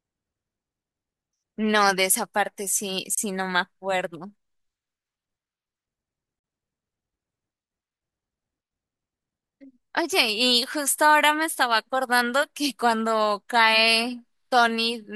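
Separately encoded pieces of the speech were joined without trimming, so each encoder's start-up silence and final-frame padding remain at the seams, producing a gap at a join of encoded pieces. At 3.15 to 3.17 s a 27 ms hole of silence opens mid-sound, and at 6.39 to 6.44 s a longer 47 ms one follows. In both, the codec smears the edges so the silent part is shorter, before the speech resumes where it stopped.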